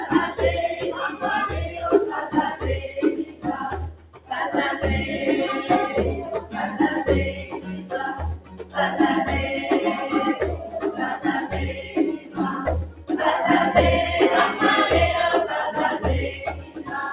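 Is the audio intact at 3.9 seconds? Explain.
No. From 3.9 to 4.31 s the sound sinks sharply, dropping by about 13 dB at its deepest over roughly 400 ms, so the sustained part thins and its decay is cut short while any sharp onsets still come through. This is sound cut by the noise suppressor: the suppressor judged this steady or fading material to be noise and pulled it down harder than the surrounding audio.

That dip sits on a wider problem running through the clip. Held sounds, ambience and tails keep rising and falling in level, swinging by about 10 dB, which gives a pumping, fluttering, hollowed-out quality. This is a noise suppressor applied to music or sounds. The processor was designed for speech, so it treats sustained, non-speech energy as background noise and keeps attenuating it.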